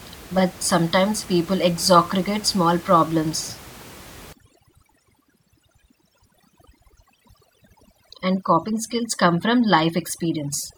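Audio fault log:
4.33–10.78 s, overdone noise removal: from 4.33 s to the end, a noise reducer set far too hard treats any band near its noise estimate as noise and pulls it down or out. The room noise, about 21 dB below the speech, collapses to near silence with twinkling specks, and quieter speech detail goes with it. A spectrogram shows a blank floor scattered with isolated bright dots and speech harmonics broken into patchy fragments.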